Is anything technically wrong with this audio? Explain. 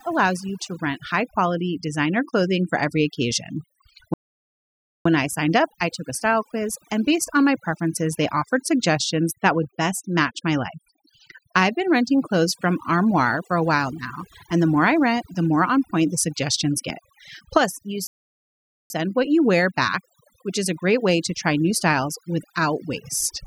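Yes. Two faults are present in this speech recording.

Overdone noise removal affects the whole clip. A noise reduction stage set too aggressively pulls individual frequency bands down whenever their level sits close to its noise estimate, and the quieter components of the voice are caught along with the noise. The gaps between phrases fall to near silence with twinkling specks, while the voice itself loses its softer detail.

Two playback stalls interrupt the audio: one from 4.14 to 5.05 s, lasting about 0.92 s, and another from 18.07 to 18.90 s, lasting about 0.83 s. In each case the sound cuts out abruptly mid-flow and the output stays silent for most of a second before the sound resumes. This is likely the player running short of data or its audio thread being blocked.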